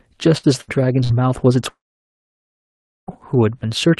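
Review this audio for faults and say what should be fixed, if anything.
Burst of packet loss at 0.37, 0.61 and 1.04 s: about 60 ms of speech is lost each time and bridged by a briefly held, fading buzz or hiss. The short gap sets it apart from a dropout. A larger jitter buffer with forward error correction would recover these bursts.

Long network dropout from 1.69 to 3.10 s: the fill fades within tenths of a second into about 1.3 s of silence before speech resumes further on, likely from a network outage. Its length and silence distinguish it from a burst. A more stable connection, or redundant transmission, would prevent it.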